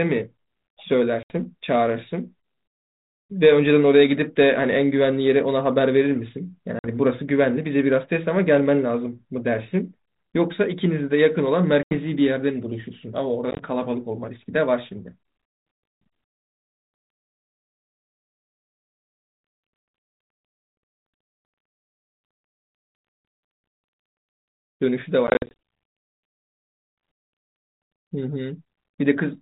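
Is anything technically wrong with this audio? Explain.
Yes, the speech has repeated dropouts from packet loss on an ADPCM call, carried over G.726 at 32 kbit/s. Gaps occur at 1.23 s (70 ms), 6.79 s (50 ms), 11.83 s (80 ms), 13.51 s (50 ms in short bursts across 80 ms), 25.27 s (160 ms scattered over about 0.3 s) and 27.13 s (150 ms). Each sounds like a hard-edged silent hole. Because the decoder's adaptive predictor and step size lose track of the sender's during the gap, the speech comes back slightly distorted, settling within tens of milliseconds.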